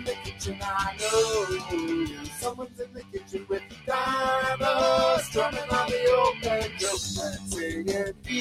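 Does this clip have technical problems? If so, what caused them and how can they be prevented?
Yes. A noise suppressor applied to music or sounds treats sustained content as noise, so the level swings by about 15 dB and the sound pumps and thins. Turn that speech-oriented suppressor off for non-speech material.

The noise suppressor cut sound at 0.00–0.63 s (about 11 dB), 2.07–3.88 s (about 14 dB), 7.33–7.48 s (about 10 dB) and 8.12–8.30 s (about 14 dB), sinking held and decaying parts. Bypass it, or use a far gentler reduction setting.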